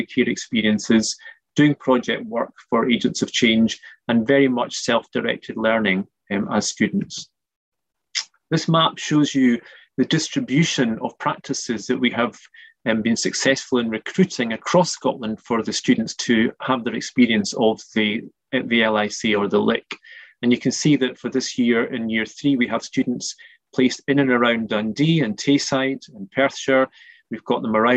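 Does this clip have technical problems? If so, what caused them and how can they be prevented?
No, nothing here sounds like a technical problem, so there's nothing that needs preventing.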